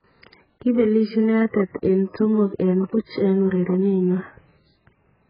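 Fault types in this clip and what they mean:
AAC compression: The speech sounds dull and muffled throughout, with nothing audible above about 5 kHz, and sustained sounds and sibilants take on a watery, warbling, fizzy texture where detail has been smeared away. This is likely heavy lossy coding of the AAC-LC kind at a very low bitrate, around 8 kbps, which fits the encoder cutting the bandwidth hard and quantising the remaining spectrum so coarsely that gaps and substitute noise replace real detail.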